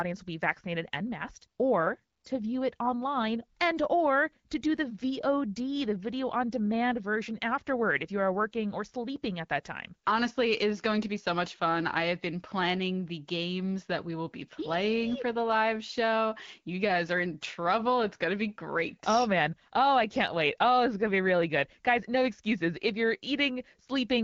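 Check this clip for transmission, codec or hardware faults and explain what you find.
No transmission, codec or hardware faults stand out here.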